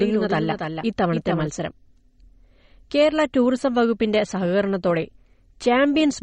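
From the start to 1.48 s, a doubled audio track: a full-band copy trails about 300 ms behind, roughly 5 dB down, likely from a second, slower capture path.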